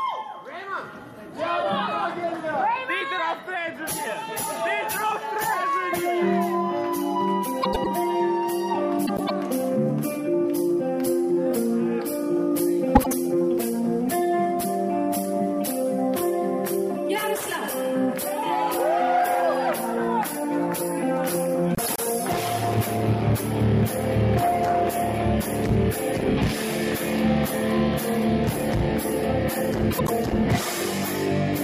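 Frames out of order occur five times: at 7.62 to 7.87 s, 9.06 to 9.30 s, 12.95 to 13.13 s, 21.75 to 22.00 s and 29.91 to 30.10 s. In each, two neighbouring runs of frames were decoded in swapped order. The second run plays before the first. Each run lasts about 105 ms in the first, second and fourth events, and about 78 ms in the third and fifth. The sound garbles into a brief flutter. No time is lost.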